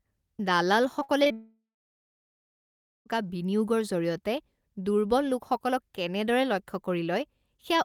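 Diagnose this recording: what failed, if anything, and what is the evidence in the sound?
The network stage failed first with repeated packet loss (robotic sound) from 0.99 to 1.32 s. Four short gaps, the longest 58 ms, were each patched by extending the previous sound. About a third of that span is concealed, giving choppy speech.

Immediately after, from 1.32 to 3.08 s, about 1.74 s of audio is missing. A brief fading continuation gives way to roughly 1.45 s of silence, and the speech resumes without the lost portion. This is likely a long network dropout, with the receiver concealing and then going quiet.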